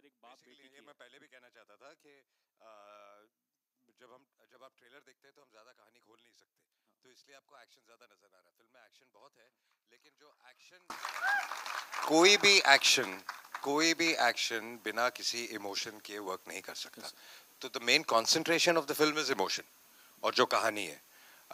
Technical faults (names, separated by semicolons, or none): one channel inverted